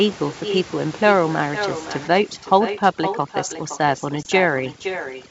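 Speech throughout is shadowed by a quieter, thinner copy arriving about half a second later, roughly 9 dB down: echo with no canceller, where the far end's loudspeaker feeds its microphone and nothing removes it. From 2.08 s to the end the background drops and breaks up into twinkling specks, which is overdone noise removal cutting frequency bands near its noise estimate. At 4.23 s a brief hard-edged hole of about 20 ms, consistent with a couple of lost packets, is followed by slightly distorted speech. This is packet loss on an ADPCM call, where the decoder's predictor and step size fall out of step with the sender's and take a few tens of milliseconds to recover.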